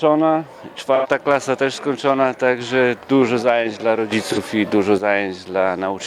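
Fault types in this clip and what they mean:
AAC frame loss with concealment: missing coded frames were rebuilt from the last good spectrum, leaving brief smeared, noisy patches near 0.95 s (about 85 ms, fitting two frames) and 4.32 s (about 43 ms, one frame). Spectrograms show blurred, detail-free blocks; waveforms show no dropout gap.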